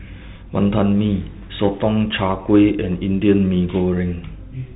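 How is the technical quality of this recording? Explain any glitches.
The technical quality is poor. The whole recording passes through a Bluetooth CVSD headset codec. The damage is plainly audible from start to finish. Nothing above about 3.8 kHz survives, so the speech sounds thin and boxed in. CVSD codes each sample as a single up-or-down bit and adapts its step size. Loud, fast-rising sounds outrun that step and distort. S sounds turn scratchy. A granular hiss sits under the speech, which fits a 64 kbps CVSD link.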